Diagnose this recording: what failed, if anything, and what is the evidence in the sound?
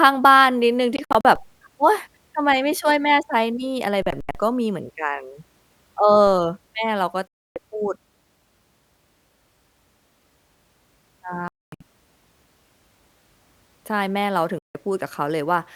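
Speech drops out completely five times, and the pattern points to the wireless link, most likely a Bluetooth dropout where packets missed their delivery deadline. The gaps are at 0.96–1.25 s (about 142 ms lost in scattered runs, longest 61 ms), 4.02–4.35 s (183 ms scattered, longest 81 ms), 7.27–7.56 s (a solid 284 ms), 11.48–11.81 s (305 ms, one 244 ms run) and 14.59–14.75 s (a solid 163 ms). The losses come in multiples of roughly 20 ms, which fits packet-sized chunks. Speech resumes as if it had kept playing. On a spectrogram these show as sharp-edged vertical bands of total emptiness across all frequencies.

A DC step sits at the converter stage. At 1.36 s the waveform's zero line jumps to an offset, producing a low thump, and by 6.27 s the offset is gone. This is consistent with an input offset being switched in, or a converter recalibrating. The speech itself carries on unchanged over the step. 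On a waveform view the trace rides visibly off-centre after 1.36 s. A spectrogram shows a broadband click with energy at the bottom edge at the step.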